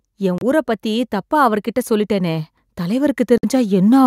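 From 0.18 s the automatic gain rising begins: the gain control judged the input too quiet and kept lifting its gain, about 7 dB in total by 4.02 s. Because the gain acts on everything it receives, the speech and the background noise swell together, a slow, steady increase in loudness and noise floor rather than a sudden jump.

Two brief Bluetooth stalls, most likely caused by interference delaying packets until the headphones' buffer ran empty, interrupt playback. Between 0.38 and 0.43 s the audio drops out for about 30 ms, and between 3.38 and 3.45 s it drops out for about 55 ms. Each is a clean cut to silence, after which the speech carries on from roughly where it broke off, heard as a short hiccup in the flow.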